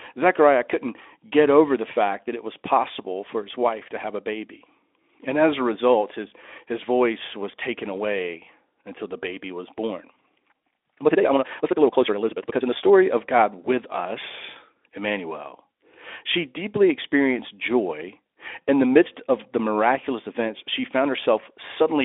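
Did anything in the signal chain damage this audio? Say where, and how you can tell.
Yes. From 10.50 to 12.88 s a time-stretched section runs at about 1.7 times normal pace with unchanged pitch, sounding rushed. This is likely editing software dropping short pieces to fit a length. A spectrogram shows steady harmonic spacing but crowded syllables.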